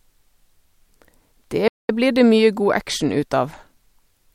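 At 1.68 s the speech stops dead and the output stays silent for about 0.21 s, resuming at 1.89 s with "blir det mye god". This is a playback stall, likely the player running short of data or its thread being held up. The speech simply halts in mid-flow for a noticeable moment before carrying on.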